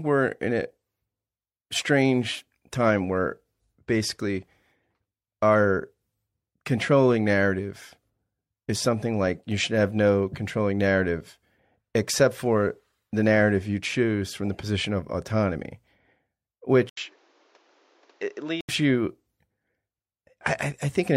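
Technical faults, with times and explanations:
16.89 to 18.69 s, input switched to a poorer device: after a break of about 80 ms the speech turns duller and boxier, with nothing above 7.6 kHz, roughly 5 dB quieter, and carrying a new background noise some 30 dB under the speech, before the fuller sound returns at 18.69 s. The likely cause is the recording input jumping to another microphone or a headset's call mode, whose narrower band, own level and own noise replace those of the original device for that stretch.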